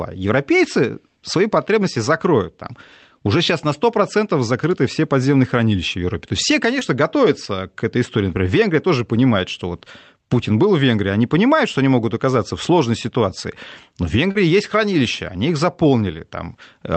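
Short concealed packet loss at 6.79 s, after "есть все", and 14.31 s, before "есть хранилища они их": lost audio was extrapolated, heard as brief smears, shown as smoothed, repeated spectral patches.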